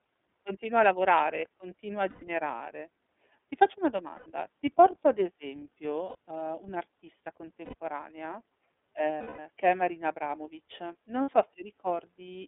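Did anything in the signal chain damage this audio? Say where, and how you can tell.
Yes. At the codec stage, the whole clip is band-limited speech from roughly 250 Hz to 3.6 kHz, with a plainly rough, slightly synthetic edge on the voice. This is consistent with the iLBC codec, and the damage fits its 13.33 kbps mode with 30 ms frames. Each frame's excitation is coded independently. On a spectrogram, energy stops in a flat ceiling at 3.6 kHz and the low band is empty below 250 Hz.

At the network stage, there are lost iLBC frames at 2.09–2.23 s (about 120 ms), 4.16–4.27 s (90 ms), 6.09–6.15 s (60 ms), 7.65–7.75 s (90 ms), 9.18–9.39 s (210 ms) and 11.22–11.29 s (60 ms). These gaps match whole 30 ms frames. The decoder filled each one by repeating the last pitch cycle blended with noise, which sounds like a held, buzzy vowel that fades over the longest loss. A spectrogram shows smeared, repeated harmonics with no formant movement. 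The waveform shows a periodic, decaying stretch. Normal speech returns almost immediately afterwards.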